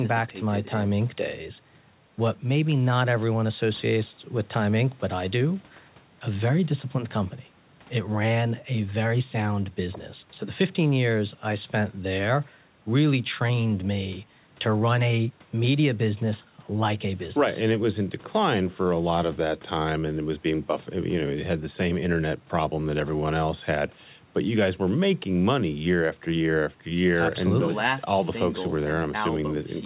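No technical faults are audible.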